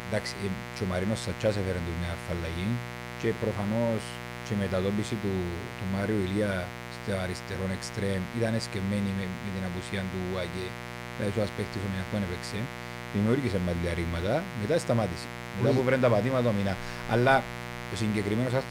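A speech recording with mains buzz running from start to finish. Something on a 60 Hz supply, such as a switching device or an unshielded run, is coupling sharp spikes into the signal path twice per cycle. Those spikes carry a dense stack of 60 Hz harmonics reaching into the kilohertz range, so the talker sits over a steady, raspy buzz rather than a smooth hum, loud at roughly 10 dB below the speech.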